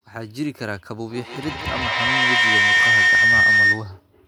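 From 1.1 s to 4.01 s a feedback howl builds: a microphone-to-loudspeaker loop gains level each pass, narrowing to a tone near 2 kHz that pulses roughly every 150 ms and peaks about 12 dB above the speech. Unlike echo, the repeats grow rather than fade.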